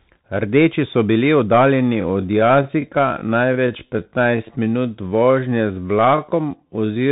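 Throughout, the sound carries the Bluetooth CVSD headset codec: a one-bit delta modulator whose adaptive step lags loud high-frequency content, so sibilants turn scratchy and a granular hiss sits underneath. Nothing passes above 3.8 kHz, which fits a 64 kbit/s CVSD link.

From 1.73 s to the end, the pace abruptly drops to about 0.68 times normal speed while pitch holds steady. This is likely a time-stretched section, where software lengthens the audio by repeating short fragments, leaving it dragging.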